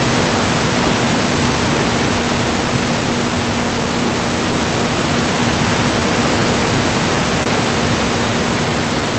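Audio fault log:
Throughout: clock drift between sender and receiver. The sender's clock runs about 3 percent slower than the receiver's, so the jitter buffer keeps draining and playback must be padded. On a waveform this shows as slightly uneven syllable spacing, with no single visible break.
0.68–9.02 s: repeated timing corrections. To keep pace with the slow sender, the receiver repeatedly inserts short repeated slices, running at 98 percent speed and adding about a fifth of a second overall. The result is a faintly dragging, unsteady tempo. A spectrogram shows small duplicated bits stretching formant stretches here and there.
7.43–7.48 s: short stall from a late packet. A packet arrived late and the buffer ran empty, so the receiver held the last sound for 26 ms before resuming where it left off, with nothing lost. The spectrogram shows a brief flat, smeared band that reads as a momentary drawn-out buzz.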